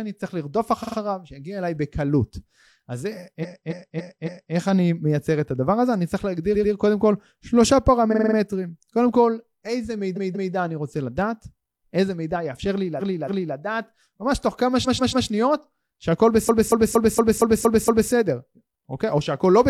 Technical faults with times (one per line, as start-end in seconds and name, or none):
0.79-0.94 repeated frames
3.39-4.51 repeated frames
6.50-6.69 repeated frames
8.08-8.33 repeated frames
10.13-10.50 repeated frames
12.96-13.52 repeated frames
14.82-15.24 repeated frames
16.44-18.08 repeated frames